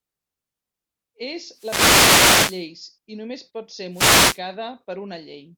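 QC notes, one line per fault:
1.53–2.67 s and 3.92–4.41 s, wireless microphone noise hits: two bursts of static washing over the speech, the first about 1.1 s long and the second about half a second. The FM radio link is fading as reflected signals cancel, so receiver hiss climbs.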